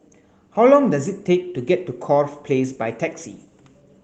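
Speech, no technical faults found; the light coding texture fits hybrid, full-band Opus voice compression at around 24 kbps, working as intended.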